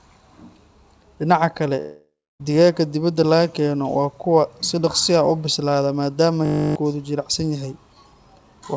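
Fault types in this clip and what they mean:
Long network dropout: At 1.80 s the sound stops arriving. The last fragment is stretched into a buzzy tail that fades over roughly 0.6 s. About 0.27 s of that is near silence. Sound resumes at 2.41 s with "digaagga dibadda laga keeno". Around 0.6 s of the original audio is simply gone and never replayed. The likely cause is a break in packet delivery, with the receiver filling the gap until it ran out of material.
System hang loop: Between 6.46 s and 6.76 s, one 20 ms slice of audio repeats exactly, fifteen times in a row. Because the slice is so short, it comes across as a steady buzz at 50 Hz, not a stutter. This happens when the system stalls but the sound hardware keeps cycling through the same buffer. About 0.3 s of the real audio is lost behind the buzz.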